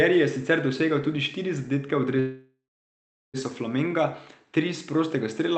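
At 2.19 s the speech stalls in what sounds like a call audio freeze, running until about 3.37 s. The likely cause is packets held up in transit so the jitter buffer ran dry; the receiver stretches the last sound into a fading tail, then sits in silence for roughly three quarters of a second. When audio resumes it picks up right where it left off, nothing lost, just everything after arriving about 1.14 s late, all through a band-limited call path topping out near 8 kHz.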